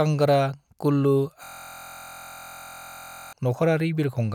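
From 1.44 s to 3.33 s the speech gives way to a system hang loop: the computer or driver stalled while the sound hardware kept replaying the same ring buffer. A 23.22 ms slice, which fits a 1024-sample buffer, repeats exactly about eighty times, producing a steady buzz at 43.1 Hz. Unlike mains hum, its timbre comes from the frozen speech fragment, and unlike a stutter, the content never advances.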